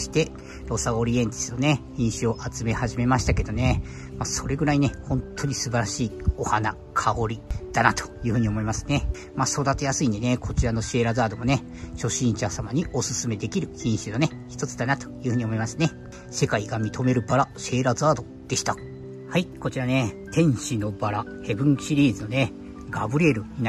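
No technical faults can be heard anywhere in the clip. Nothing in the signal chain draws attention to itself at any point.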